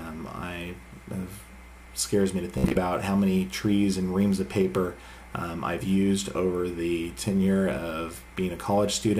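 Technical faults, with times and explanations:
2.58–2.79 s, Bluetooth stutter: the sound breaks into a rapid machine-gun repetition as the receiver replays its last short slice while data fails to arrive. About 107 ms goes missing across roughly 183 ms, the longest gap 61 ms, then playback resumes further along.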